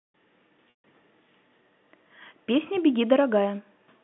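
Packet loss with pitch repetition breaks this telephone-band speech clip from 0.70 to 0.84 s. About 140 ms of audio goes missing, which fits a run of seven 20 ms packets. The receiver fills the gap by repeating the last pitch period, so the sound briefly holds on a buzzy tone that fades out over roughly 50 ms. The rest of the gap is silent until the speech cross-fades back in.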